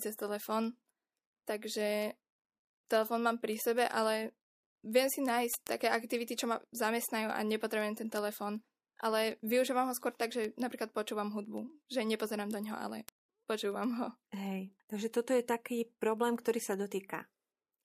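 From 0.14 to 17.74 s, word clock ticks recur roughly every 0.15 s: an unlocked receiver clock, about 150 ppm off, slips one sample, unlike random clicks.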